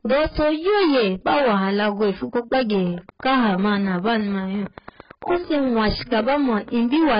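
Hard clipping runs through the whole speech clip. The signal was driven about 15 dB past what one stage could pass, so roughly a fifth of the samples had their peaks cut flat. Those flat tops add high harmonics, heard as a fuzz on every loud sound.

The audio is also dull and smeared throughout, with nothing above 5.1 kHz. Heavy damage of this kind is likely from AAC compression, and fits a bitrate near 12 kbps. Such a low rate lowers the cut-off and starves the spectrum. Sustained sounds and sibilants come out warbling or fizzy.

After "alago ifu", a train of clicks starts at 2.87 s and lasts until 7.16 s. Around forty similar pulses arrive at a regular 8.9 per second, peaking at about the level of the speech. They are heard as steady ticking over the sound. The likely source is interference, or a faulty connection or power supply.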